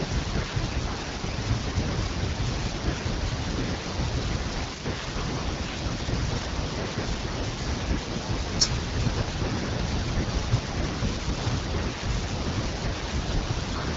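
Nothing faulty to report: the speech has passed through an AMR wideband (HD Voice) link at 12.65 kbit/s, audible only as a band that stops short of 7.5 kHz.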